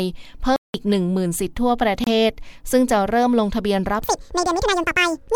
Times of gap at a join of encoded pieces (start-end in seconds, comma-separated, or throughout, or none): 2.04-2.07